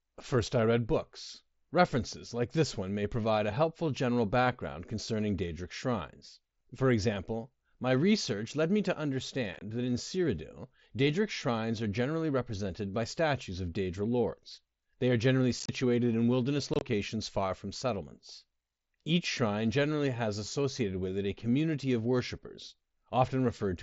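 Short, chopped holes with abrupt edges break the speech at 9.54 s after "research led me to", at 15.6 s after "are generally", and at 16.74 s before "far from settlements". This is unconcealed Bluetooth headset packet loss. Voice packets between headset and phone went missing, and silence or an idle pattern took their place without any concealment. Each event loses 45 to 52.5 ms in scattered gaps spread over 75 to 90 ms.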